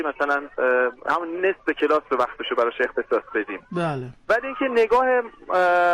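At 1.80 s there is a single sharp click, a brief tick that shows as a thin vertical line across the whole spectrum. This is most likely dropped samples: only a couple of samples, a few hundredths of a millisecond, go missing from the stream. The waveform jumps straight from one value to a later one. That step is far too short to take away any audible sound, but the sudden discontinuity is heard as the click.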